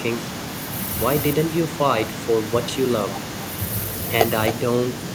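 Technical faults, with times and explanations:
Throughout, echo with no canceller: every phrase comes back around a third of a second later as a fainter copy, about 9 dB below the direct speech, sounding thin. What's happening is the far end has the call on a loudspeaker, their microphone picks it up, and nothing on that side subtracts it, so the speech makes the full network round trip and lands back as a trailing shadow.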